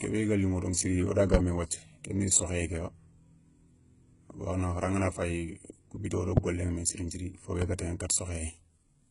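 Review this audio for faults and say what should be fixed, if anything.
The whole clip has the gritty treble of HE-AAC compression at a very low bitrate, likely around 12 kbps. The upper band is rebuilt by copying lower bands upward, so sibilants sound metallic and lispy, and nothing survives above about 11.1 kHz. To prevent this, encode at a higher bitrate or use plain AAC or a lossless format.

There are three loud pops, each a single sharp click riding over the speech. The first is at 1.34 s, right after "daηa siri wo da". The second is at 6.37 s. The third is at 7.62 s, between "siri nthiri fo" and "ga taηana". The first two hit roughly 20 dB above the speech and the third somewhat less. A sudden voltage spike, likely from a connector, switch or static discharge, gets added on top of the signal. To prevent these, secure the cables, avoid touching switches or plugs mid-take, and ground the gear properly.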